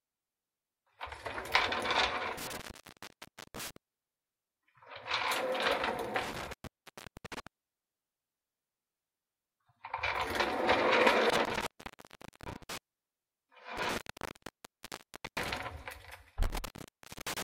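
Intermittent contact keeps biting here: the sound drops out around 2.38, 6.23, 11.30, 13.77 and 16.43 s, gaps lasting roughly 0.95, 0.64, 0.8, 1.39 and 0.51 s. A loose plug or cable is briefly opening, so each dropout crackles at its edges with faint hiss underneath.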